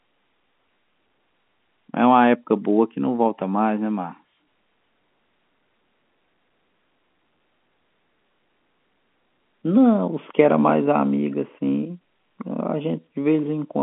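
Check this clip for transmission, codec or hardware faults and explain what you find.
No transmission, codec or hardware faults were found.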